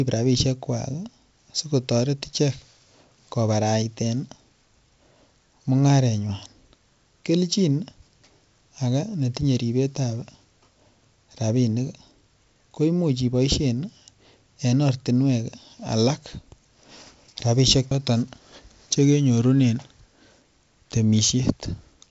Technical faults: none

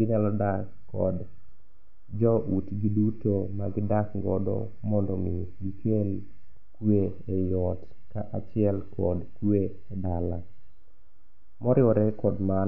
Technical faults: none

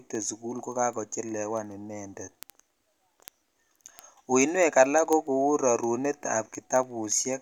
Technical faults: word clock ticks

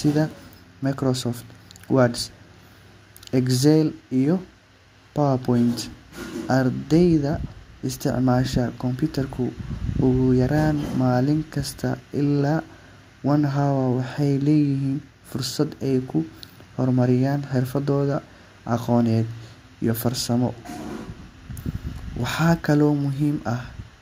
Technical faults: none

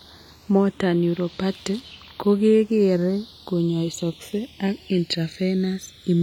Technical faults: channels drifting apart

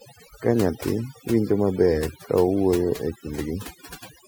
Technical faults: overdone noise removal

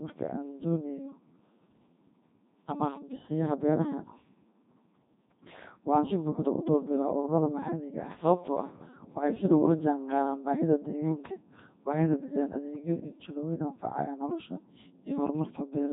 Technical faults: Codec 2 vocoder

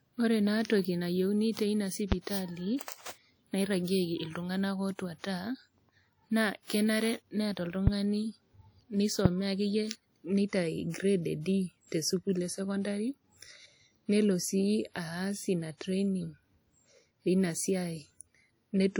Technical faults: WMA compression; loud pop

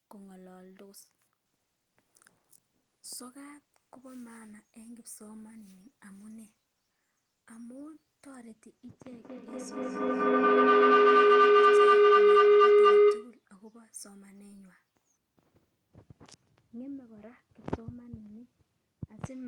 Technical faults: feedback howl

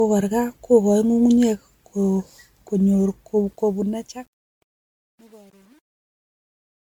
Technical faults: generation loss; truncation distortion on a fade

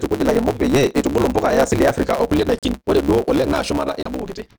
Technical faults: block size mismatch (truncated); Bluetooth stall

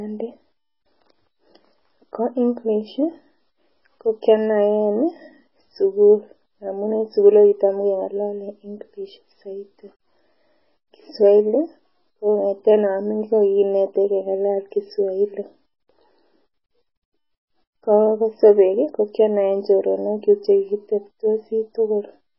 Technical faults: MP3 compression

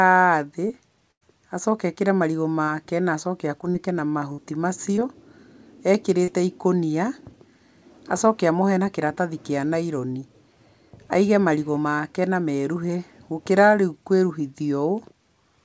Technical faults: short concealed packet loss; burst of packet loss

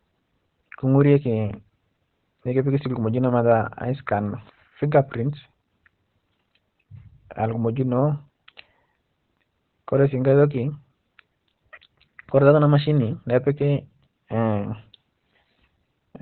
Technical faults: Opus compression

